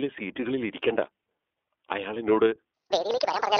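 Throughout the speech, the signal passes through the iLBC codec, a narrowband VoIP coder that rebuilds each frame's excitation on its own with no help from the previous frame. The passband is limited to roughly 300 Hz to 3.5 kHz, and the plainly audible coding damage, with its slightly rough, synthetic texture, fits the 13.33 kbps mode with 30 ms frames. Everything sounds thin and boxy, with no air or sibilant sparkle above the band edge.

At 0.77 s a loose connector crackle interrupts the audio. A worn or dirty contact briefly breaks and remakes the circuit, chopping the signal, and any DC on the line adds pops. It is heard as a short, irregular burst of scratchy crackle, over almost as soon as it starts.

From 2.74 s to the end, the section plays at the wrong speed, 1.75 times faster than it should, most likely because it was fitted to the wrong clock during playback or editing. Speed and pitch rise together, and the pitch jumps by around ten semitones at once. 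The last stretch of speech suddenly turns high, squeaky and hurried, with a chipmunk-like quality, until the clip ends.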